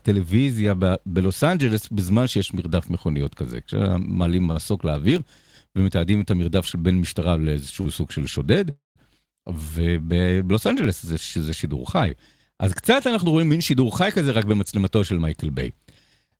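At 4.51 s a packet arrived late and the jitter buffer ran dry, causing a short stall from a late packet. The receiver held the last bit of speech for 49 ms until the packet turned up, then carried on from the same point. Nothing is lost, but that moment is drawn out with a slight buzz or dip. The same happens at 7.81 s, this time stretched by 42 ms.

Between 5.16 and 5.49 s the processor could not finish its tiny audio buffers on time. A handful of blocks, each under a millisecond, were skipped outright rather than replayed. Each skip leaves a hard-edged gap, and together they produce processor overload crackle: a brief gritty tearing over the speech. A longer episode runs from 10.84 to 11.56 s, with around seven missed blocks scattered through it.

From 8.70 to 8.99 s there is a call audio freeze. The speech is interrupted and filled for 252 ms. The first part is a fading continuation of the last sound, and the final 150 ms is silent. 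Then the speech resumes exactly where it left off, so a gap has been inserted with nothing dropped. The likely cause is packets held up in transit, emptying the jitter buffer.

From 13.25 to 15.53 s the jitter buffer had built up more audio than its target. To trim the excess delay, the receiver repeatedly cut out pitch-period-sized slivers, removing roughly a fifth of a second in total. This jitter buffer speed-up makes the speech run at about 110% of normal speed with its pitch unchanged, so that stretch sounds noticeably hurried.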